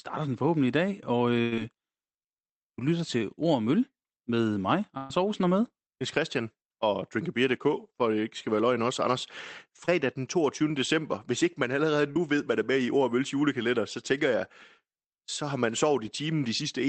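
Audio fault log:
1.41–1.54 s and 4.98–5.12 s, burst of packet loss: after "forhåbentlig i dag og" and after "med mig", about 100 ms and 120 ms of audio vanish. Each gap is filled by the last sound stretched out and fading, a held buzz or dying hiss. The audio resumes further on, so these differ from a brief smear.
9.86–9.89 s and 12.11–12.18 s, short concealed packet loss: a 20 ms hole, and then a 40 ms hole between "hvis ikke man allerede" and "ved der er med". Each is patched by continuing the prior sound and is heard only as a quick smear or wobble, too short to become a held tone.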